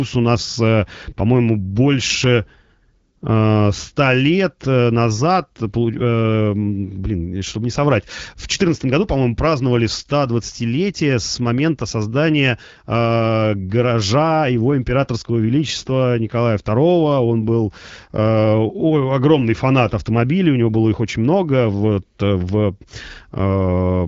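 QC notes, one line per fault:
No faults found; the speech sounds consistent with an AMR wideband (HD Voice) path at about 12.65 kbit/s, with only light coding texture.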